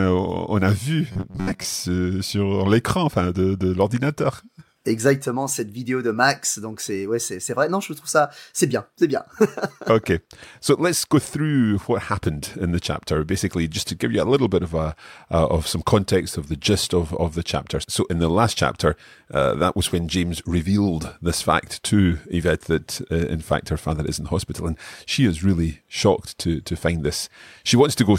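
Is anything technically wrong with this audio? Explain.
Yes. Robotic sound from repeated short buffers occurs from 1.12 to 1.65 s, between "a vu" and "sur l'écran enfin de". Late-arriving audio likely forced about half of it to be filled with roughly 11 ms repeats, imposing a rigid, metallic buzz near 94 Hz.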